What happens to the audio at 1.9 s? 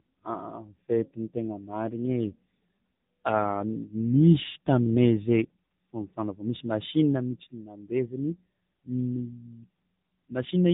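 At 1.9 s the speech shows tandem speech coding, present throughout the clip. The signal sounds passed through two speech coders in series, consistent with G.726 followed by AMR-NB, each re-encoding the previous one's errors. The result is rough, muffled, warbly speech with nothing above 3.8 kHz.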